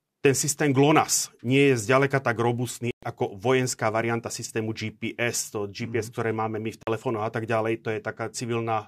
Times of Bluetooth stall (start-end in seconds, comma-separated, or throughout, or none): 2.91-3.03, 6.83-6.87